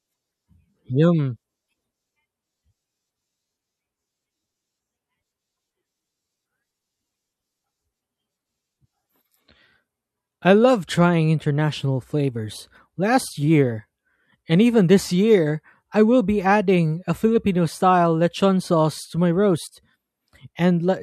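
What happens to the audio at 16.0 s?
Nothing goes wrong at 16.0 s; the speech plays through that point with no dropout, click, distortion or other fault.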